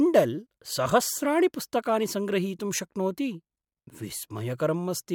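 Speech recording; no technical faults are audible anywhere.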